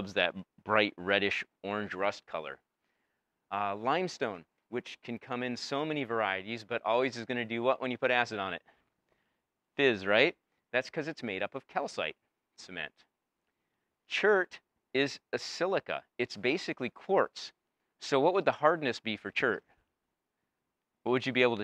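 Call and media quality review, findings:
Nothing stood out on listening; no fault to log for this clip.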